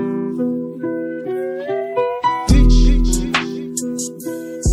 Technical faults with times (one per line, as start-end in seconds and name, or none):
none